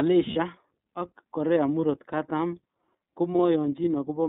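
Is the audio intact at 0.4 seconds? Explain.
No. A lost iLBC frame runs from 0.33 to 0.37 s, and 0.4 s falls just after it. One frame, about 30 ms, never arrived, so the decoder filled the hole by repeating the last pitch cycle mixed with noise. That gives a brief held, slightly buzzy vowel-like smear. Because each iLBC frame is decoded independently of the one before, the voice is right again almost immediately after 0.37 s.

The iLBC codec also shapes this moment, as it does the whole clip. The line passes roughly 200 Hz to 3.7 kHz, so everything above that is missing and the voice sounds narrow. The coding of the excitation leaves plainly audible roughness and a synthetic edge. The 30 ms framing heard in the concealed gap fits the 13.33 kbps mode.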